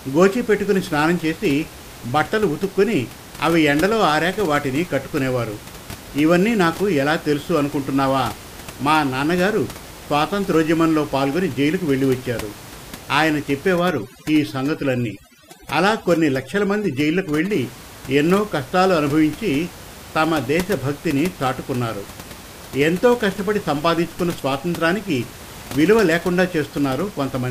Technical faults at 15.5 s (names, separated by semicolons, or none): overdone noise removal